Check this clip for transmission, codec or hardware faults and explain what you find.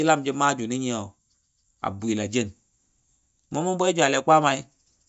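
Nothing stood out on listening to this speech recording.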